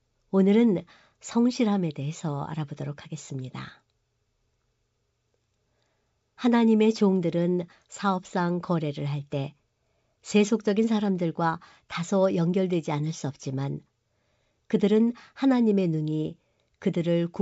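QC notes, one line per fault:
Nothing to flag here, since the G.722 wideband telephone coding at 64 kbit/s comes across just as it should and nothing in the recording calls for a note.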